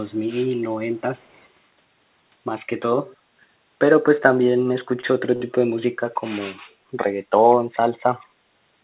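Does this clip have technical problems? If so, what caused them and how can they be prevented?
Yes. A faint echo leak trails the speech by 148 ms at 0.09–0.29, 0.53–0.60, 0.96–1.01, 1.17–1.45 and 7.50–7.56 s, the last one about 10 dB stronger. It is likely a far-end loudspeaker whose echo canceller let residual signal back into the microphone. Using a headset or better acoustic isolation and echo-canceller tuning at that end would prevent it.

Background gated by the echo canceller appears at 3.10–3.18 s. The room sound dips by about 11 dB for roughly 50 ms because the canceller pulled the microphone down hard while playback was active. A gentler suppression setting, or comfort-noise fill during suppression, would avoid the hole.

Two short stalls from late packets occur at 5.01–5.06 s and 5.36–5.43 s. Each time the jitter buffer ran dry, so the receiver held the previous sound for 24 ms and then 41 ms before resuming with nothing lost. 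A slightly deeper jitter buffer or a steadier network path would prevent these stalls.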